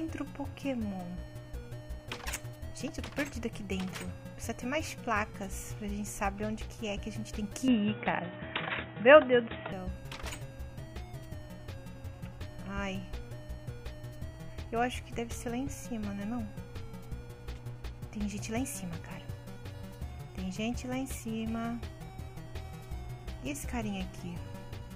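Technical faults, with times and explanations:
7.68–9.72 s, input switched to a poorer device: the sound abruptly goes dull and boxy, with nothing left above about 3.8 kHz, a level jump of roughly 5 dB, and a new noise floor sitting around 30 dB under the signal. There's no gap at either edge, just a clean cut over and back. That mix of band-limiting, level shift and different background most likely means the system briefly grabbed another, narrower input and then returned to the original.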